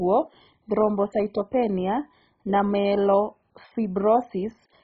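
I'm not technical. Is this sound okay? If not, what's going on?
No. The speech was likely squeezed too hard by MP2 compression, which splits sound into bands and runs short of data, so upper bands get switched off. Throughout, nothing above 7.5 kHz remains, leaving it dull, with a gurgling, grainy roughness.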